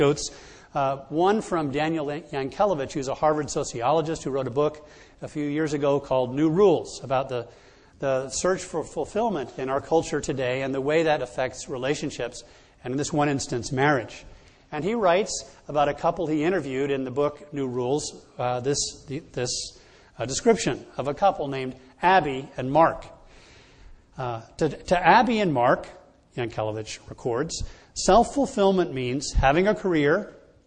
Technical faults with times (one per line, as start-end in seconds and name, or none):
0.00-30.66 MP3 compression
24.85-24.88 pre-echo